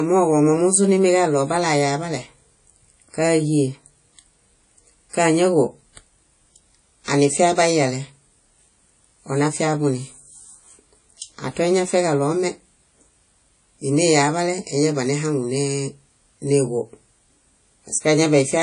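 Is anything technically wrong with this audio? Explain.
Yes. Throughout the speech, the recording shows the damage of a low-bitrate transform codec, likely WMA compression, with the character of an early WMA encoder at a rate near 32 kbps. Such an encoder quantises long blocks of the spectrum coarsely, so its noise smears over tens of milliseconds and weak components are dropped. Here that is plainly audible: a ringing, washy texture with hiss that swells and fades with the voice, and nothing at all above about 10.1 kHz.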